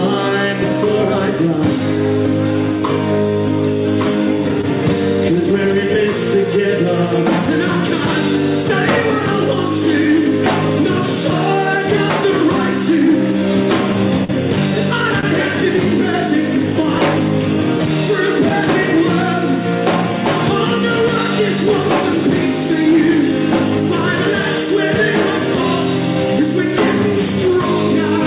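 At 4.61 to 4.66 s a sound hangs on about 20 ms too long with a faint buzz. This is a short stall from a late packet: the jitter buffer ran empty, the receiver stretched the last sound until the packet arrived, and playback resumed 20 ms later with nothing lost.

From 14.24 to 14.31 s there is a brief smear. This is short concealed packet loss: about 40 ms never reached the decoder, and the receiver filled the hole by extending the preceding sound, then blended back.

At 15.20 to 15.26 s a second late-packet stall holds the sound for about 26 ms, shifting playback 26 ms later.

Nothing is heard above 4 kHz throughout, which fits a narrowband G.711 A-law call codec at 64 kbit/s.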